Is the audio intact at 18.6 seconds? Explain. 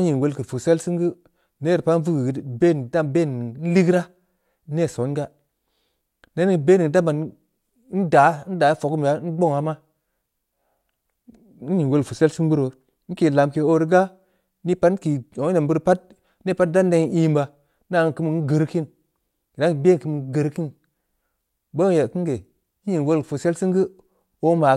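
No. At 18.6 s you're inside a stretch of resampler restarted on every block, running from 16.48 to 21.42 s. Each 20 ms chunk got converted on its own, likely a 48 kHz to 44.1 kHz rate change, so at every block edge the converter had no real neighbouring samples to work with and left a small error. Those errors land 50 times a second, so you hear a buzzy 50 Hz edge riding on the speech.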